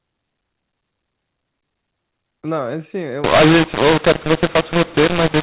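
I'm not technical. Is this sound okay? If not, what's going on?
No. From 3.24 s to the end, A-law audio is decoded as mu-law, a mu-law and A-law mix-up. The speech turns harsh and distorted, and pauses fill with noise.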